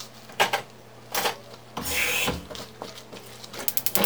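From start to finish the audio's been read two samples at a time, so these sounds run at double speed and a full octave up.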